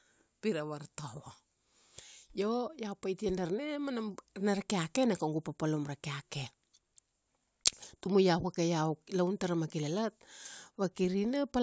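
No technical faults are audible.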